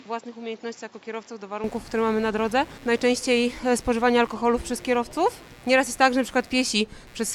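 For the first 1.64 s the audio most likely comes from a poorer input device: nothing above 7.6 kHz, the level sits around 10 dB lower, and faint added background noise appears, before the sound switches cleanly to the fuller source. Throughout, computer activity noise from processor or peripheral load disturbing the shared ground adds a buzz pulsing at around 100 Hz, roughly 30 dB below the sound.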